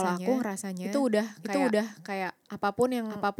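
Throughout the speech, every stretch of sound is heard twice: a second, equally loud copy trails the first by around 0.7 s, full-band and dry, with none of the decay or room colour a real echo would carry. That is a doubled audio track, most likely the same signal reaching the mix a second time through a slower capture path, or an edit that left two copies out of step.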